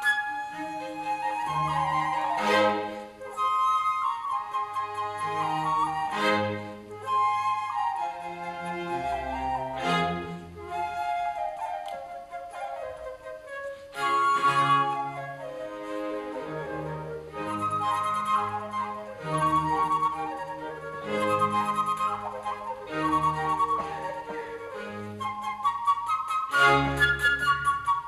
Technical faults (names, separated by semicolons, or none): none